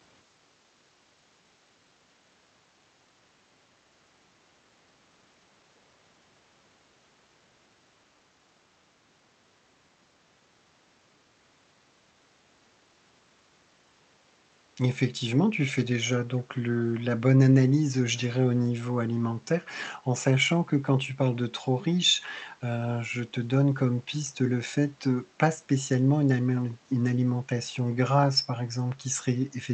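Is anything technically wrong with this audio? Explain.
Yes. From 16.96 to 17.02 s there is an echo leak: a faint copy of the speech returns 463 ms late, far below the main level, likely from an echo canceller on a far-end loudspeaker letting some pickup through. A spectrogram shows a weak, time-shifted repeat of earlier harmonics.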